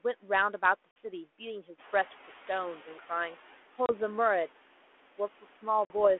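Right through the clip there are noise suppressor artifacts: the background is pulled down by about 11 dB in the gaps and swells back under the speech.

At 0.91 s there's packet loss on the ADPCM call: a hard-edged 50 ms hole, about a handful of packets. The decoder's predictor and step size lose track of the sender, so the speech comes back with some grit before it settles.

From 1.78 to 3.44 s the noise suppressor is catching up. The room noise jumps by about 12 dB at around 2 s, and the suppressor's estimate lags, so the louder noise comes through first and then sinks over about 1.7 s to roughly 9 dB lower.

Two more ADPCM dropouts follow, a 30 ms hole at 3.86 s and a 50 ms one at 5.85 s. Each has the same abrupt silence and then the same gritty re-entry while the decoder gets back in step.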